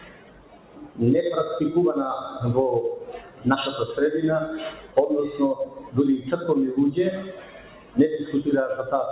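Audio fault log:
Throughout: noise suppressor applied to music or sounds. A suppressor built for speech stays active and treats steady tones, ambience and decaying tails as noise. It pulls them down by roughly 15 dB while sharp attacks pass. The level pumps and the sound thins.
0.00–1.00 s, 3.00–3.46 s, 4.71–4.97 s, 5.62–5.95 s, 7.26–7.97 s: sound cut by the noise suppressor. In each span the suppressor mistakes held or fading sound for noise. The level dips by about 11 to 12 dB. Sustains sink and decays end early.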